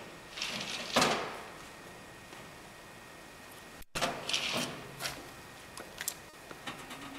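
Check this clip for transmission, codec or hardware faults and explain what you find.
There's one transmission fault here: a short concealed packet loss at 6.29 to 6.35 s. About 40 ms of audio arrived too late or not at all, so the receiver extended the preceding sound and blended back in. You hear it as a quick smear or wobble.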